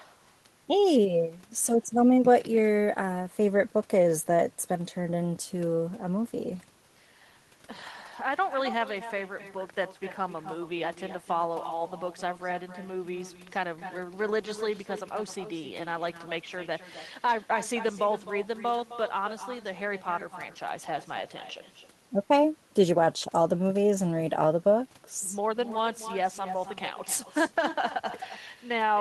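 From start to finish the speech carries an echo with no canceller: the far end's loudspeaker feeds back into its microphone, nothing subtracts it, and the talker's own sound returns after the network round trip, around 300 ms later and about 12 dB down. Each phrase trails a faint, hollow copy. A spectrogram shows every syllable repeated as a weaker ghost offset to the right; the waveform shows small secondary bursts filling the gaps after each phrase.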